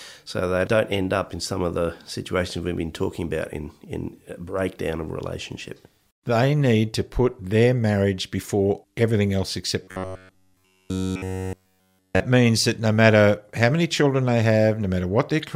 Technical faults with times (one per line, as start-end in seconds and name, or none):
9.83-12.20 robotic sound from repeated short buffers